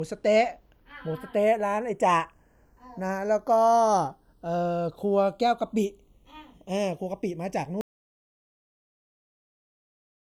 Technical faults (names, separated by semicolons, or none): channels drifting apart; audio dropout to silence